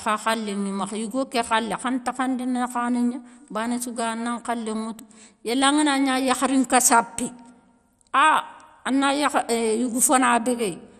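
From start to finish the speech has likely been through MP2 compression at a low rate, which fits about 64 kbps. Starved upper sub-bands drop out, leaving nothing above 14.1 kHz, and the bands that remain are coarsely quantised, giving a dull, gurgling, granular edge.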